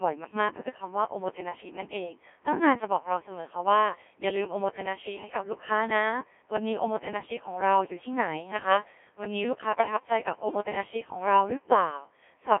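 From start to end the speech is robotic, buzzy and heavily damaged, confined to 300 Hz to 3.5 kHz with nothing above 3.8 kHz. That is the Codec 2 vocoder, resynthesising speech from sine waves using only pitch, voicing and envelope, which fits about 1.3 kbit/s.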